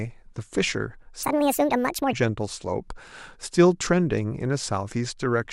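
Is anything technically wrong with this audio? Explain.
Yes. A section at the wrong speed runs from 1.23 to 2.13 s, where the speech suddenly plays 1.7 times too fast, likely from being fitted to the wrong clock. Speed and pitch rise together, so the voice jumps up about ten semitones and sounds hurried and chipmunk-like before snapping back.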